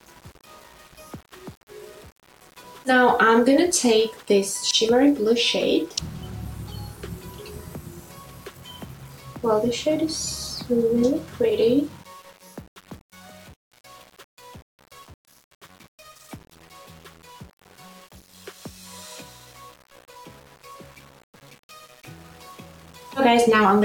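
From start to end, the sound carries grainy distortion that tracks the signal. This is low bit depth without dither. The audio was likely rounded to very few steps, which fits about 7 bits. The error sits roughly 30 dB below the signal.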